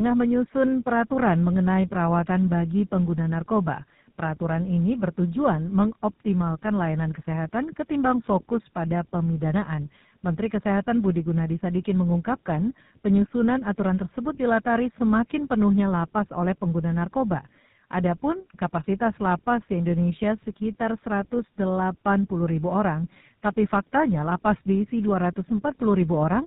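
Tandem speech coding runs through the whole speech: the audio was decoded and re-encoded in sequence, and the grit suggests two speech codecs, ending at what sounds like GSM full rate. Nothing reaches above 3.8 kHz. Unlike a single codec, its damage compounds into layered warble and muffling.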